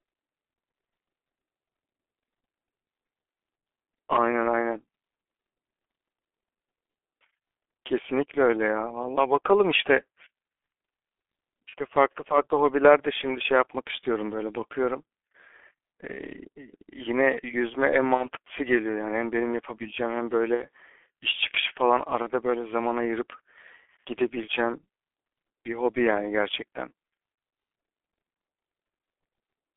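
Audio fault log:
throughout: G.723.1 codec. The speech passes through a narrow telephone band, roughly 250 Hz to 3.4 kHz, at about 6.3 kbit/s, and the codec damage is heavy. Everything above the band is gone, so the sound is muffled. The codec's voice model is updated only once per 30 ms frame, which leaves the voice hoarse and the consonants smeared. Unlike brief dropouts, this colouring never lets up, because the same coarse model shapes every frame.
11.69 to 11.74, 18.14 to 18.28, 20.54 to 20.64, 22.22 to 22.27: VoIP packet loss concealed by the speech codec. Each gap is one or two lost 30 ms frames, and the decoder fills it by carrying on from the last pitch and filter while the gain falls. What fills the gap is a short buzzy or noisy stretch that fades, not silence and not a click. That is what marks it as concealment rather than a plain dropout. Each new frame is decoded from the one before, so the sound stays weak and rough for a moment after the packets resume.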